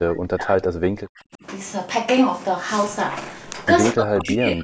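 From 0 to 1.43 s and from 3.94 s to the end, the speech sinks deeply, then less so. The waveform shrinks and the spectrogram fades, likely speech suppressed in double talk.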